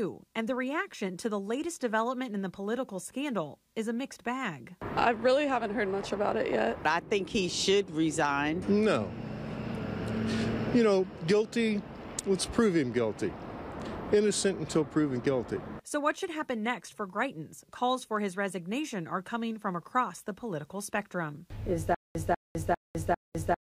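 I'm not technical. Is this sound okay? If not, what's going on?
No. From 21.95 s to the end, a stutter with silent gaps: a 0.19 s burst repeats four times, every 0.4 s, with silence between, likely a stalled player or stream.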